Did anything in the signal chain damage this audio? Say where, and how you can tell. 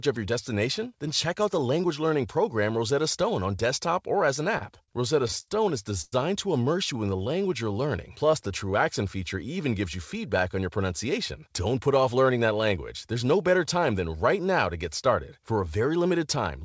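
Yes. Between 4.58 and 6.14 s the network path and receiver jitter buffer produce repeated stalls (stutter): seven hiccups where the buffer ran dry and the receiver stretched the last sound to cover the wait. That adds 282 ms, about 18% of the span, with the longest at 107 ms, and nothing is actually lost. On a waveform you see sustained, repeating cycles and a fade-down in the longer gaps. On a spectrogram you see flat, smeared harmonics bridging the holes.

From 6.93 to 8.71 s there is a jitter buffer slow-down. To rebuild its reserve, the buffer repeatedly duplicated single pitch periods and pause fragments, inserting 164 ms so the speech runs at 91% speed with unchanged pitch. It sounds drawn out. On a spectrogram the harmonic lines stay at the same heights while syllables widen. On a waveform you see near-identical periods repeated back to back.

From 10.60 to 12.78 s there is a jitter buffer speed-up. 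A surplus of queued audio made the buffer cut out short pitch-period chunks, roughly a fifth of a second in total, so the speech runs at 108% with pitch intact and sounds hurried. On a spectrogram, syllables and gaps appear compressed in time without any upward shift of the harmonics. The waveform shows small splices where cycles were dropped. Across the whole clip, content stops at 8 kHz, which fits the wideband G.722 call codec.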